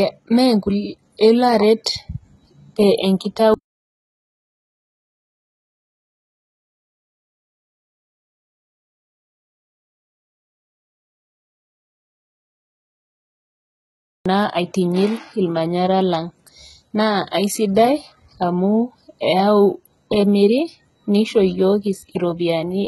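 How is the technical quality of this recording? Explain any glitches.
The recording is heavily compressed throughout, with one brief smeared attack near the start.

HE-AAC compression, whole clip: The treble sounds synthetic rather than recorded, and nothing is present above about 11.8 kHz. The likely cause is HE-AAC at a very low bitrate, with damage consistent with roughly 16 kbps. The codec keeps only the lower spectrum and rebuilds the top by copying lower bands upward under a coarse envelope, so the upper harmonics of the speech do not line up with the ones below. S sounds come out gritty, metallic or lispy.

Pre-echo, 1.84 s, just after "elo aret": A short hiss of about 18 ms arrives just ahead of a sharp attack. The transform codec spreads its quantisation noise across a whole block, and because the attack falls late in that block, noise sized for the loud part also fills the quiet moment before it. 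The onset loses its crispness and sounds blurred.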